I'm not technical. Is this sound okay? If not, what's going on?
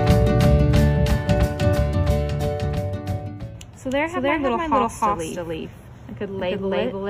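No. All the way through, every sound is heard twice: a second, equally loud copy trails about a third of a second behind, with no fading echo. This is a doubled audio track, most likely from the same audio being recorded again by a slower path and mixed in.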